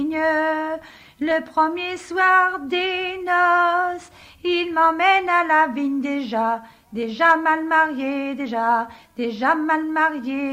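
No faults detected at any point in the audio.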